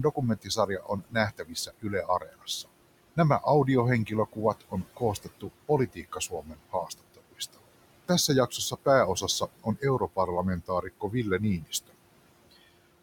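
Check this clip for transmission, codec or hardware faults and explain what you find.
The clip shows two related processing faults, both from a noise suppressor acting on speech recorded over room noise that sits about 17 dB below the voice.

Noise suppressor artifacts run through the whole clip. The suppressor estimates the steady room noise and pulls down each frequency band it judges to be noise, frame by frame, by up to about 21 dB. Because the gain changes from frame to frame, the background dips away in the gaps and swells back under the voice.

Speech cut by the noise suppressor occurs in four stretches: 0.03 to 2.69 s, 4.06 to 7.59 s, 8.08 to 10.28 s, and 10.61 to 11.95 s. The suppressor misreads low-level parts of the speech as noise and attenuates them along with the background, by about 21, 20, 18 and 21 dB at the deepest points. The affected portions add up to roughly a second in the first stretch, a second and a half in the second, and about 0.3 s and 0.4 s in the last two. 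Soft consonants and word endings in these spans sound swallowed or faint.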